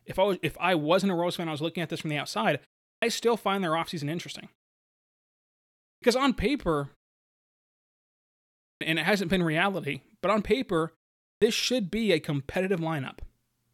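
Clipped start after a pause at 2.96, 5.95, 8.74 and 11.35 s: after each silence the output wakes late, losing 63 to 71 ms of speech. Words begin abruptly, and the waveform jumps from flat straight into the sound with no onset.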